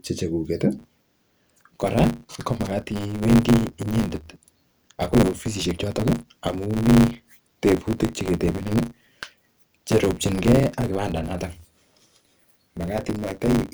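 A speech recording that, from 0.78 s to the end, carries a steady 100 Hz buzz and runs about 1.16 times too fast while its timbre stays roughly normal. This is a block size mismatch (truncated): one stage hands over longer blocks than the next stage takes in, so the tail of every block is discarded. Each cut produces the buzz at the block rate, and the missing samples speed up delivery. The sound fits 512-sample blocks being written.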